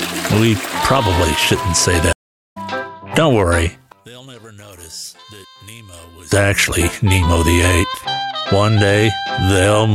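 At 2.13 s the audio drops out for about 0.43 s, ending at 2.57 s, in a stream reconnect: the connection broke, the player went quiet, then re-established the link and started a new decoder partway through the stream. When sound returns it has skipped ahead by roughly half a second, so material in that gap is simply missing. The restart lands on a different point, with the first frame fading in, making the join audible as a jump rather than a pause.

From 3.92 s to 6.32 s the level falls by about 23 dB, leaving a faint residue where the full sound should be. The likely cause is one channel inverted: one side of the stereo pair has its polarity flipped, so when the channels are combined to mono, everything they share cancels. What remains is only the difference between left and right, which is why the passage sounds so weak until the level recovers.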